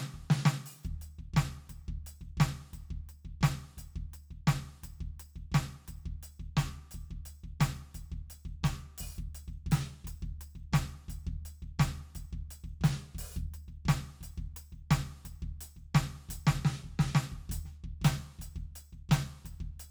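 A piece of music with no technical fault to be heard anywhere in the recording. Nothing in the audio calls for a time, a value or a cause.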